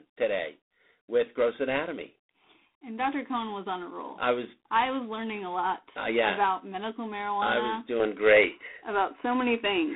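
From the start, the speech carries plainly audible G.726 ADPCM damage. The line passes roughly 200 Hz to 3.6 kHz, and nothing reaches above 3.8 kHz. The coder sends only a few bits per sample, each describing the gap between the signal and a running prediction. With so few bits, the errors are large. They come through as a harsh, rasping hiss that rises and falls with the speech. The sound fits G.726 at 24 kbit/s.

At 8.00 s the input changes, most likely to a poorer device, and stays that way to the end at 9.96 s. There is no gap at the switch. The top of the band drops abruptly, with nothing above 3 kHz, so the speech turns duller and boxier. The level shifts by about 5 dB. A new, faint background noise appears, far below the speech.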